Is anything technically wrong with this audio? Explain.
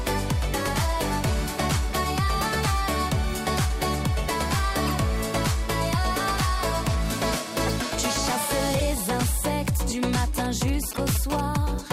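Yes, two things.

First, there are corrupt frames decoded at 2.28 s, 4.83–4.97 s, 7.66–7.73 s, 8.79–8.82 s and 10.94–10.99 s. Damaged compressed frames got played anyway, so misread data throws energy into the wrong frequencies. You get short chirps and blips, with the longest burst at 4.8 s.

Second, there are GSM signalling bursts from 10.36 to 11.41 s, most likely from a nearby 2G phone handshaking with the network. The audio circuitry rectifies its radio bursts into a galloping dit-dit-dit of short buzzes at 217 Hz, sitting about 15 dB below the sound.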